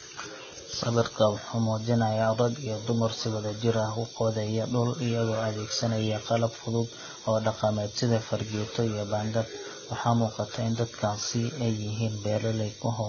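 From start to finish, the speech is dull, with nothing above 6.9 kHz. The artefacts are layered. Two different sets of codec artefacts are heard together. This mix likely comes from transcoding between lossy codecs. The sound fits a low-rate Vorbis encode at around 18 kbit/s that was re-encoded as HE-AAC at about 24 kbit/s. The second codec spent its bits on the first one's damage and added its own. The lower cut-off survived.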